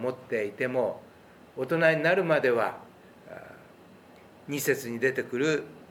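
Nothing here calls for attention, since there are no dropouts, glitches or other technical faults anywhere in the audio.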